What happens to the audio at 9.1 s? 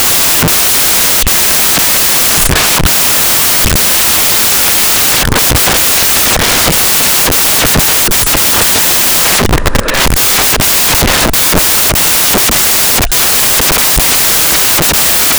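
At 9.1 s the speech carries loud, harsh broadband noise from samples built from the wrong bytes, present across the whole clip. Each sample's bytes are misassembled, so the rapidly changing low bits dominate.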